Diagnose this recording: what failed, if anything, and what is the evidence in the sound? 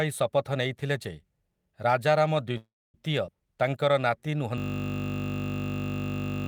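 Call audio freeze, network stage: from 2.57 to 2.96 s the sound stalls into a fading buzz, then about 260 ms of silence, likely from delayed packets draining the jitter buffer. The waveform shows a decaying tail and then a flat line.

Skip ahead, network or jitter buffer: at 3.26 to 3.29 s roughly 70 ms of audio is dropped, and the two sides are butted together. The spectrogram shows an abrupt discontinuity with no gap.

Jitter buffer slow-down: from 3.46 to 4.37 s playback runs at 93% speed with unchanged pitch, adding 71 ms. The spectrogram shows stretched harmonics with repeated periods.

System hang loop, driver or buffer stage: from 4.58 s to the end, one 20 ms segment repeats 95 times, producing a 50 Hz buzz and losing about two seconds. The waveform shows an identical repeating block, and the spectrogram shows evenly spaced vertical striations.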